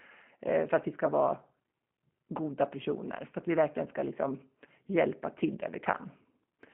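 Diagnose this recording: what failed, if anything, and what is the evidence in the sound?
Codec stage: plainly audible G.729 coding throughout, speech rebuilt from a vocal tract model and sparse pulses, sounding rough and synthetic. The spectrogram is blank above 3.4 kHz, with blurred harmonics.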